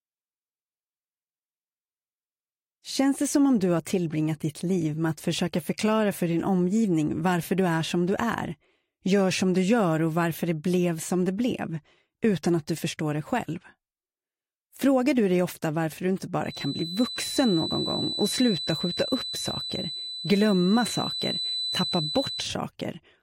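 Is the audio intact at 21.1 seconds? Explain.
No. A feedback whistle runs from 16.42 to 22.56 s, a thin steady 4 kHz tone swelling and fading slowly, roughly 10 dB under the sound, likely from a speaker-to-microphone loop held just at feedback. A spectrogram shows a narrow horizontal line at 4 kHz.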